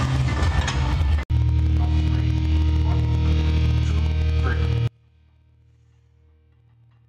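At 4.87 s an audio dropout to a faint residue begins and runs to the end. A link likely broke, leaving a faint signal about 35 dB down, a sudden cliff in waveform and spectrogram.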